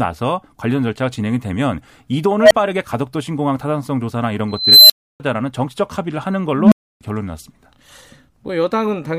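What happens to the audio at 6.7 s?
At 6.7 s the speech is caught in an unstable filter fault, running from 6.54 to 7.01 s. A recursive filter has lost stability, so its output feeds back on itself and keeps growing. A low tone of around 200 Hz swells over about 0.18 s into a loud, clipped drone. Then the values overflow and the sound drops out for about 0.29 s until the filter resets.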